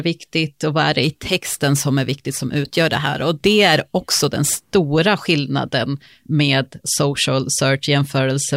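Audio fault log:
1.04–4.62 s, crude rate conversion: right after "och vad är det" the speech gains a gritty, inharmonic fizz on louder and brighter sounds, about 20 dB down. It fits a 44.1 kHz to 48 kHz change by repeating samples, whose periodic error makes unrelated tones.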